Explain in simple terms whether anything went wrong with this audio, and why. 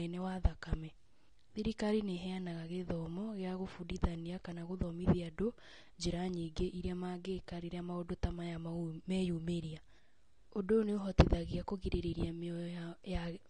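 Yes. The speech sounds dull and smeared from start to finish, with a watery, fizzy edge on hissing sounds. That points to AAC compression, likely squeezed hard to save space, so the encoder dropped the highest frequencies and filled some gaps with rough approximations.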